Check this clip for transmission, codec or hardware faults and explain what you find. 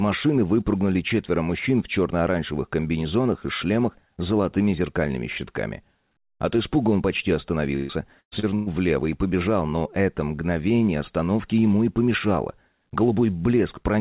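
One transmission fault stands out, heard through a narrowband call path with nothing above 4 kHz. From 7.76 to 8.69 s there is repeated packet loss, giving a robotic sound. Four gaps arrive in quick succession, the longest about 130 ms, and each is patched by stretching the preceding sound, so around 42% of that span is filler. Unlike a single dropout, the rapid repetition gives a choppy sound with pieces missing rather than one clean hole.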